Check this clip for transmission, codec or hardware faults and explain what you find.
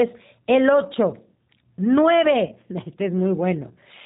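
Two faults turn up: a low-rate speech codec across the whole clip, and one brief dropout patched over by that codec.

The G.729 codec coding runs throughout, and the damage is plainly audible. At 8 kbit/s the decoder rebuilds the speech from a vocal tract filter, a pitch predictor and a few pulses per frame, and nothing above 4 kHz makes it through. You hear a dull, band-limited voice that's a bit rough and synthetic.

Around 2.47 to 2.54 s there's VoIP packet loss concealed by the speech codec. About 20 ms of audio went missing, which fits a single lost 20 ms packet. The decoder covered the gap by extending its last pitch and filter while fading the level, so the speech briefly smears into a buzzy tone or coloured noise that fades. Each frame builds on the one before, so the voice stays weak or distorted until about 2.54 s.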